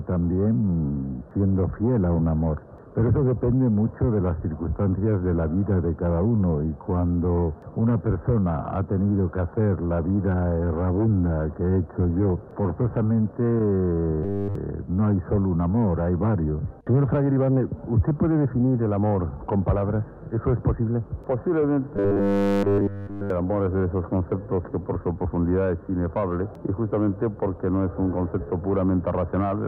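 Robotic sound from repeated short buffers appears at 14.23–14.55 s and 21.96–23.30 s. The audio collapses into a rigid 100 Hz metallic buzz, likely a 10 ms chunk looped while nearly all new audio is skipped. Unlike dropouts, there are no silent gaps, only a fixed pitch.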